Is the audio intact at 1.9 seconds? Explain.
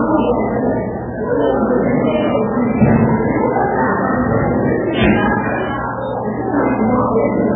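No. At 1.9 seconds, as throughout, the sound is cut off above 3.7 kHz and swirls watery, likely from heavy MP3 compression at a very low bitrate near 8 kbps, where the encoder drops weak frequency lines frame by frame. That flickering warble, not just lost treble, sets it apart from a plain low-pass filter.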